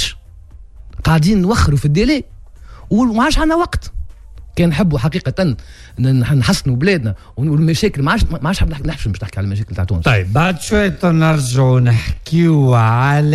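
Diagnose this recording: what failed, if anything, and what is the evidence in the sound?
A time-stretched section runs from 10.35 s to the end, slowed to about 0.56x with pitch unchanged, so it drags, likely from software stretching at the processing stage.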